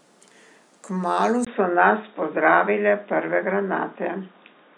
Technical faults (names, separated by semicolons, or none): input switched to a poorer device